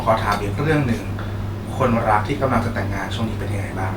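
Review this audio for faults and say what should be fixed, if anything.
Nothing to fix here, as no technical faults turn up anywhere in this bit of speech.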